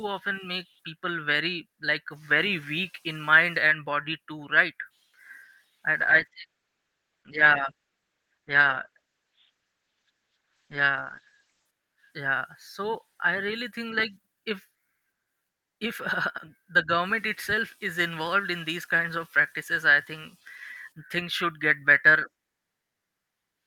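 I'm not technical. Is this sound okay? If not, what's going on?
No. From 6.01 to 11.73 seconds, a call bitrate drop makes the speech sound muffled and rough. The connection sent less detail, then recovered.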